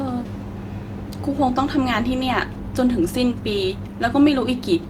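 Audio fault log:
No fault in this speech clip.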